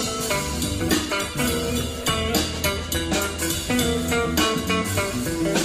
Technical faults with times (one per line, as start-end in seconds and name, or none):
0.64-2.36 call bitrate drop